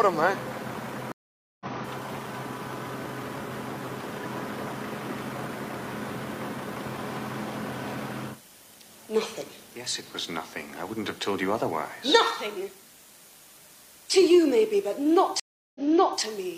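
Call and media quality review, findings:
Stream reconnect at 1.12–1.66 s: about 0.49 s of silence, then the audio resumes roughly half a second later in the stream. Connection drop, fresh decoder, live-edge rejoin. Unlike a plain dropout, material is skipped, not just muted.

Stream reconnect at 15.40–16.22 s: 0.35 s of silence, then resumes 0.46 s earlier, so a short stretch repeats. Server burst resend after reconnect. The repeat and restart, not a glitch, separate it from packet loss concealment.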